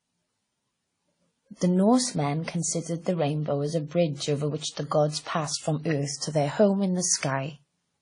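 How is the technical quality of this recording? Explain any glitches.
The quality is compromised throughout. The speech has a dull top end with layered coding artefacts.

From start to finish, nothing sounds above about 10.1 kHz. The artefacts of two different codecs are heard together. The likely cause is transcoding between lossy codecs. The chain points to WMA at 32 kbit/s, then AAC-LC at 32 kbit/s. The second encoder spent its bits re-coding the first one's damage, and the lower cut-off carried through.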